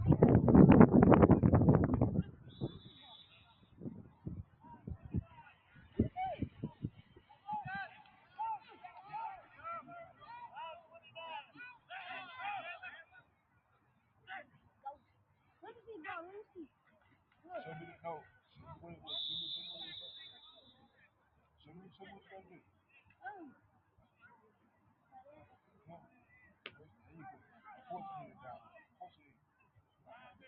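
A noise suppressor built for speech was left running on this audio, so the noise suppressor applied to music or sounds treats steady tones, ambience and decaying tails as noise and pulls them down, with its gain swinging by roughly 15 dB. Onsets mostly slip through while anything sustained sinks behind them, giving a pumping, fluttering, thinned-out quality across the whole clip, all within the call path's 8 kHz bandwidth.

The sound cut by the noise suppressor shows up in seven stretches: 1.86 to 8.83 s (deepest drop about 14 dB, with roughly five seconds of it pulled down), 9.41 to 10.27 s (about 12 dB), 10.8 to 11.91 s (about 14 dB), 13.03 to 15.81 s (about 14 dB), 16.5 to 18.6 s (about 13 dB), 20.62 to 27.65 s (about 14 dB) and 28.3 s to the end (about 13 dB). In each, held and fading parts dip or have their decay clipped short, while sharp attacks survive.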